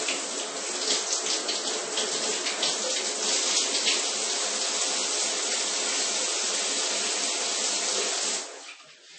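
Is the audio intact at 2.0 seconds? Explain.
No, MP3 compression runs through the whole clip, including 2.0 s: nothing above 8.4 kHz survives, and weak components flicker watery, likely from a low bitrate near 30 kbps.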